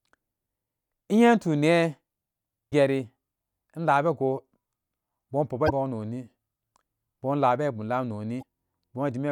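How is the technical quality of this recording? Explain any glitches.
The recording has three short glitches in the speech. All come from damaged data in a compressed stream, at 2.68 to 2.73 s, 5.65 to 5.71 s and 8.39 to 8.43 s, each roughly 40 to 55 ms long. At those points corrupted bytes in the encoded stream leave the decoder unable to read the frames. It loses sync and hunts for the next valid frame header. That brief misdecoding comes through as a sharp, unnatural chirp or blip cutting into the speech.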